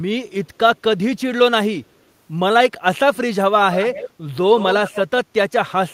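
Echo leak, from 3.72 to 4.1 s and again from 4.58 to 5.02 s: a faint repeat of the speech trails about 157 ms behind, roughly 10 dB quieter. This is likely a far-end loudspeaker whose echo canceller let some of its microphone pickup back into the call.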